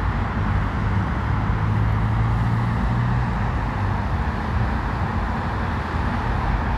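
A recording of sounds, with no technical fault to be heard anywhere in it. Nothing in the audio calls for a time or a cause to be pointed out.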